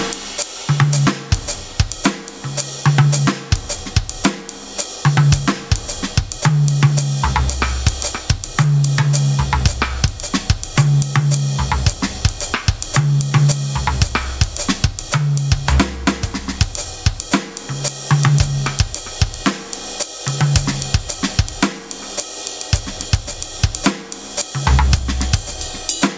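Gain pumping runs through the whole music clip: the level ducks by around 15 dB under each loud moment, squashing the dynamics. The likely cause is excessive input gain driving a fast limiter. On a waveform, the envelope looks flattened, with the quiet stretches bulging upward. A spectrogram shows that the call microphone processing leaves nothing above 8 kHz.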